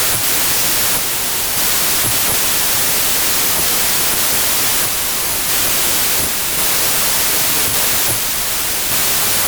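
From start to finish the speech suffers from a wrong sample width. It was stored as 32-bit integers but read back as packed 24-bit integers. Sample boundaries drift across the bytes, so most values mix pieces of neighbouring samples. The result is loud, harsh noise with the speech buried underneath. Only some values keep the signal's top bits. Playback also runs at 0.75 times normal speed, so everything sounds slow and lowered in pitch.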